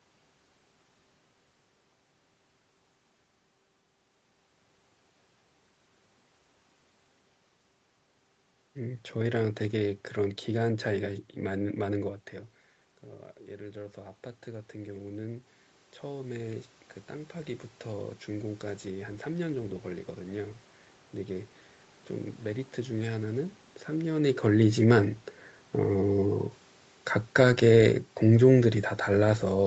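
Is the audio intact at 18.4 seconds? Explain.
No. Automatic gain rising runs from 13.6 to 21.55 s, so 18.4 s falls in the middle of it. After the input level dropped by about 13 dB, coinciding with the talker moving back from the microphone around 12 s, the gain control judged the signal too quiet and raised its gain by about 10 dB over those eight seconds. At 18.4 s the speech and the room noise behind it are still swelling upward together.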